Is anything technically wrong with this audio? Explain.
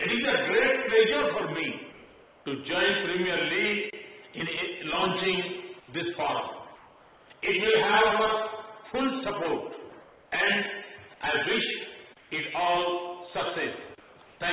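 Yes. There are six short spots where the quiet background turns into comfort noise in place of the background: at 5.8–5.88 s, 6.76–7.3 s, 10.02–10.32 s, 12.18–12.3 s, 14.0–14.16 s and 14.26–14.4 s. In each one, the natural background, which sits about 27 to 31 dB below the loud parts, gives way to a flat, featureless hiss. That hiss is up to about 5 dB quieter, as at 5.8 s, and level at 14.26 s. The likely cause is discontinuous transmission: the sender stops sending whenever its detector hears only background, and the receiver fills the gap with synthetic noise shaped roughly like what it last heard. Nothing above 4 kHz comes through on the call path.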